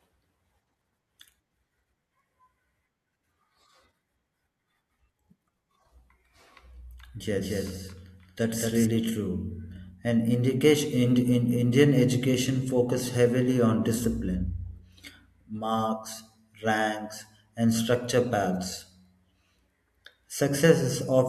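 From 7.37 to 8.85 s a doubled audio track appears: a copy roughly 200 ms late and about 5 dB quieter, likely from a slower capture path, showing as duplicated, offset waveform bursts.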